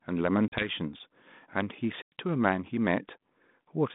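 Packet loss on an ADPCM call dropped 40 ms at 0.48 s and 100 ms at 2.02 s, desynchronising the decoder's predictor, so the hard-edged gaps return slightly distorted, settling by 0.69 s and 2.14 s.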